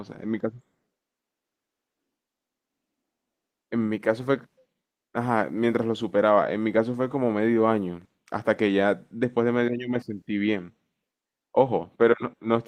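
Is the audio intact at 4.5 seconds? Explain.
Yes, at 4.5 seconds the speech is intact, with no fault there.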